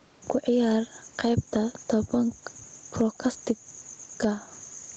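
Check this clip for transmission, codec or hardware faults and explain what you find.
One fault runs through the whole speech clip. Gain pumping is present throughout: the level breathes in step with the talker, a swing of around 10 dB. The likely cause is input gain set far too high for the microphone, so a fast limiter or compressor clamps down on every peak and releases in the gaps. That narrows the distance between loud and soft passages and leaves the speech sounding squashed. The call's microphone processing can also be heard in the limited top end, with nothing above 8 kHz.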